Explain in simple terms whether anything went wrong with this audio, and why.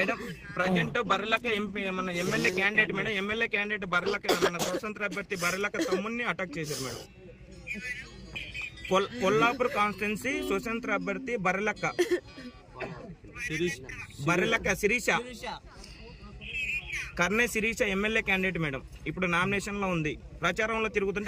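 A call bitrate drop runs from 0.65 to 6.67 s. The connection's capacity fell, so the audio was squeezed into far less data and sounds coarser and duller until it recovers.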